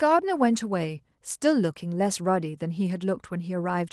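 Nothing in this speech recording stood out as a technical fault on listening.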